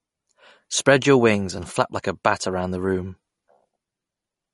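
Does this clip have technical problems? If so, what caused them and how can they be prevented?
Yes. The speech carries plainly audible MP3 compression throughout. Nothing is heard above 11.2 kHz. Weak frequency lines drop in and out between frames, giving a watery, swirling texture. This likely comes from a low bitrate, which fits about 48 kbps. Encoding at a higher bitrate, or keeping an uncompressed copy, would prevent it.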